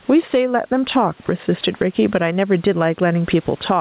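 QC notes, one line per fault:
Throughout: gain pumping. The gain swings by around 15 dB, so loud and soft speech sit squashed close together; likely a fast limiter reacting to input gain set far too high.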